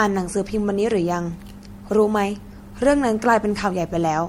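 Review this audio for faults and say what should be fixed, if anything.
Throughout the speech the sound is swirly, smeared and hollow, with blurred attacks and nothing above 16.5 kHz. This is likely generation loss: repeated MP3 passes, around four, at a rate that fits about 62 kbit/s, each requantising on a shifted frame grid. Prevent it by encoding once, from a lossless master.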